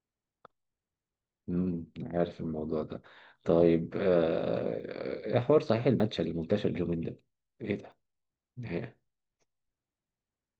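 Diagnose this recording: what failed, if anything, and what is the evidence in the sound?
Three little skips in the speech at 4.8 s, 6.0 s and 7.92 s, each with the sound jumping ahead and no gap of silence. That pattern points to the driver or buffer stage, most likely a dropped buffer (overrun): the app didn't read its samples before the hardware wrote over them, so the chunk vanished and the edges got spliced together. Roughly 20 ms went missing at 4.8 and 7.92 s, and about twice that at 6.0 s.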